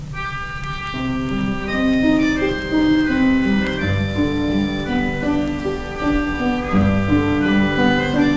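No technical faults are audible.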